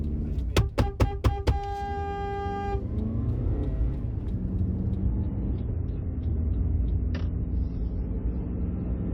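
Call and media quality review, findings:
Adaptive stream at a lower bitrate, 5.03 s to end. Player dropped to a lower-quality rendition mid-stream, likely after a throughput dip. Sound suddenly thins, no gap: nothing above 6 kHz, smeared, swirly codec artefacts. Consistent with a switch from roughly 128 kbit/s MP3 to 24 kbit/s MP3. Component: ABR logic and network path.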